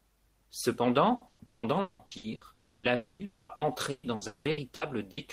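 Speech with repeated packet loss (robotic sound) from 1.15 to 2.44 s and 3.55 to 5.20 s: seven gaps each, up to 180 ms, patched by extending prior sound, giving choppy speech with pieces missing. Between, at 2.53–2.86, 2.95–3.22 and 3.25–3.52 s, the audio is replaced by a fading buzz or hiss, likely long network dropouts.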